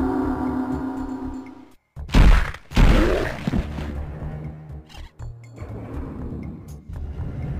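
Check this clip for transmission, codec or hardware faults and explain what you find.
No faults turn up when this clip is checked.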